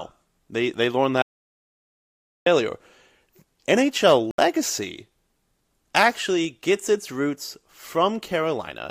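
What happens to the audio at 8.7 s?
Nothing goes wrong at 8.7 s; the speech continues cleanly through that moment with no dropout, click or distortion.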